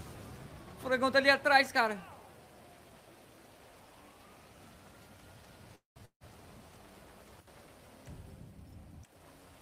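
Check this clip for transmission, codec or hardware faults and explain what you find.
Two transmission faults fall close together around the six-second mark.

From 5.75 to 6.00 s there is a call audio freeze. The sound stops moving forward and the last moment is held as a fading buzz that sinks into roughly 140 ms of silence, about 205 ms of stretched-out fill in all. The likely cause is late packets draining the jitter buffer. What sets it apart from a dropout is that the audio then resumes exactly where it halted, with nothing skipped, only pushed about 205 ms later.

From 6.05 to 6.23 s a long network dropout follows. Again the last sound is extended as a decaying hiss, lasting about 151 ms with some 100 ms of it silent, most likely because no packets arrived at all for that stretch. Unlike the freeze, when the audio returns it has jumped ahead: about 160 ms of material is simply gone, so the sound picks up further on rather than from the point where it stopped.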